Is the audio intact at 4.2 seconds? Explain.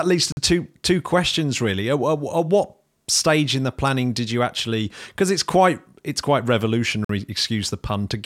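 Yes, at 4.2 seconds the speech carries on with no audible fault.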